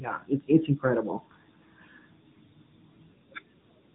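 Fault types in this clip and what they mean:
AMR narrowband mobile codec: The speech has passed through the AMR-NB phone codec, which rebuilds the voice from a vocal-tract model every 20 ms. Nothing above 4 kHz survives, so it sounds muffled and clearly buzzy, which fits a mid-rate mode near 10.2 kbps.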